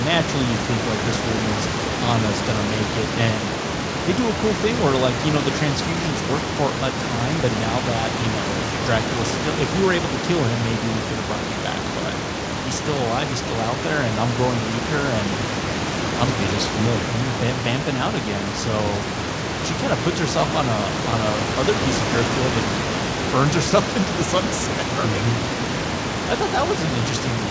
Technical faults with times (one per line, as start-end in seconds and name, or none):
none